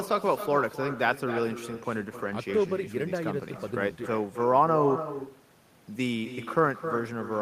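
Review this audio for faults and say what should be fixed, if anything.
Every phrase of the speech is trailed by a quieter, thinner copy roughly a third of a second later, about 10 dB down, for the whole clip. This is echo with no canceller: the far end's loudspeaker feeds its microphone, returning the talker's voice after the network round trip. Enabling acoustic echo cancellation at the far end, or having that participant use a headset, would prevent it.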